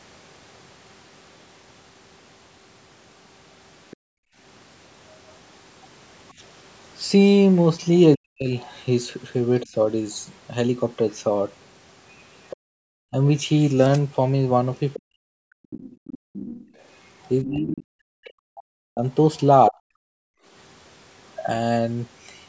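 Speech recorded on a call, with echo-canceller trouble running through most of it. From 3.91 to 19.42 s the other side's voice leaks through, a second voice sitting around 20 dB under the talker, likely because the canceller failed to fully subtract the loudspeaker signal picked up by the microphone. On a spectrogram it shows as faint, broken harmonic traces between and beneath the main speech bands. The background is gated by the echo canceller at 3.97 to 4.37 s, 12.57 to 12.83 s, 16.18 to 16.33 s and 20.13 to 20.46 s. During each gate the room tone drops by about 40 dB while the canceller clamps the microphone against loudspeaker output, then comes back. These look like abrupt near-silent gaps in the noise floor, clean vertical edges on the waveform and blank columns on the spectrogram. Speech is suppressed in double talk between 8.16 and 9.75 s, roughly half a second in total, and again from 13.11 to 19.85 s, about two seconds in total. 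There the talker's own voice ducks hard, by around 40 dB at worst, or breaks into pieces, likely because the canceller could not tell near speech from echo while both sides overlapped. It shows as chopped, thinned envelopes and missing upper harmonics. Energy stops at 8 kHz, consistent with a 16 kHz call path.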